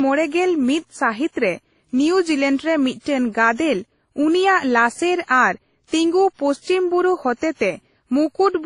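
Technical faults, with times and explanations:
Throughout, transcoding between lossy codecs: nothing above 10.1 kHz and two distinct artefact textures layered together, likely a low-rate WMA encode re-encoded through another codec, unlike single compression.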